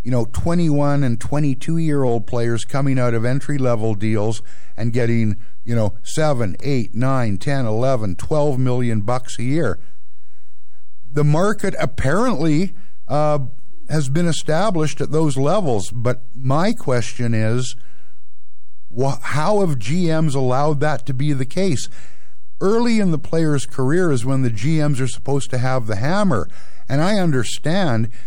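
A DC offset sits under the whole recording, so the speech rides on a constant shift away from zero. You won't hear it directly, but it eats headroom and shows up as steady energy at the very bottom of the spectrum.

Three short speed-and-pitch jumps look like a drift correction step, likely clock-matching software abruptly changing playback rate to manage its buffer. From 1.36 to 2.08 s, just before "players coming out of", the speech runs about 6% fast and a semitone sharp. From 5.01 to 5.97 s, after "entry level deals and", it runs about 6% slow and roughly a semitone flat. Between 10.16 and 11.11 s, after "million bucks a year" and before "the market apparently uh", it drops the same way. Each time it snaps back.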